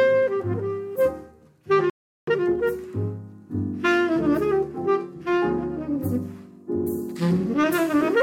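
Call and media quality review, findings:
Playback stall, 1.90–2.27 s: audio cuts out mid-flow for about 375 ms, then resumes. Waveform drops to flat silence; spectrogram shows a clean vertical blank band. Likely player buffer underrun or blocked audio thread starving the output.

Time-compressed catch-up, 2.27–2.63 s: audio runs at 2x speed, hurried but at normal pitch. Player drains its backlog by excising short segments and cross-fading. Spectrogram shows harmonics at unchanged frequencies, with events packed tighter.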